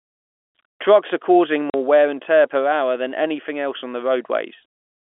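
At 1.70 s the speech drops out completely for 40 ms, ending at 1.74 s. That's packet loss filled with silence: a stretch of audio never arrived, and the receiver just played nothing in its place. The gap length points to two packets of 20 ms going missing back to back. You hear a short hole with hard edges. The telephone-band G.711 coding around it stays narrow, as expected.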